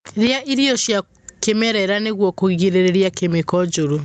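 Speech over a call path, with gain pumping from start to finish: the gain swings by something like 15 dB, and loud and quiet passages sit squashed close together. The likely cause is input gain set far too high with a fast limiter or compressor reining it in on each loud syllable. Everything stops near 8 kHz, consistent with an Opus codec running at wideband.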